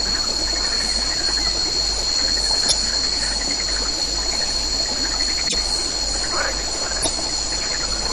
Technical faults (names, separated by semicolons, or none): broken MP3 bit reservoir